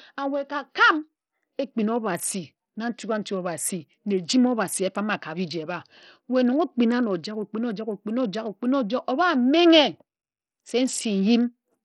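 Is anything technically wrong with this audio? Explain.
Yes. Throughout the speech, the sound has the damage of a starved Bluetooth SBC compression link, likely from a low-quality wireless hop. SBC splits the signal into a few broad sub-bands and shares out bits with no model of hearing. At a rate this thin, which fits roughly 64 kbps, the upper bands get almost nothing. The treble drops out and flickers, and heavy gritty quantisation noise and aliasing sit on the voice.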